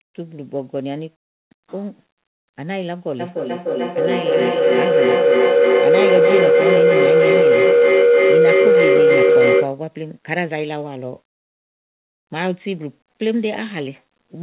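From 3.19 s to 9.84 s a tone near 500 Hz swells to about 10 dB above the speech, with repeats about 300 ms apart. This is feedback howl: two devices in one room share the call, and each loudspeaker-to-microphone trip adds gain.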